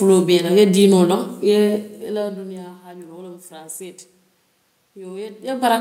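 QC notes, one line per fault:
No faults found.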